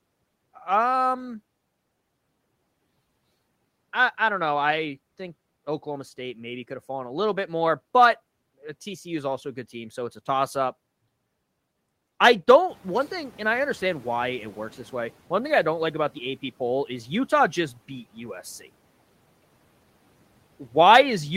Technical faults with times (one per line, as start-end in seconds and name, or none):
12.68-15.16 noise suppressor catching up